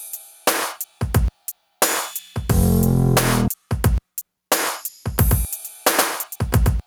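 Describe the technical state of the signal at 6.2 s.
Gain pumping runs through the whole clip, including 6.2 s: the level swings by around 5 dB as a fast limiter or compressor clamps down on each loud sound, likely because the input gain is set far too high.

A doubled audio track is also present from 5.18 s to the end: a second full-band copy trails about a tenth of a second behind, roughly 5 dB quieter, with no decay, likely from a slower capture path adding a second copy.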